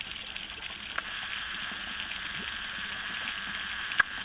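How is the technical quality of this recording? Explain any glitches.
No glitches or faults can be heard anywhere in the recording. It has the narrow band of a phone call, with nothing above 4 kHz, which fits G.711 telephone coding over a call path.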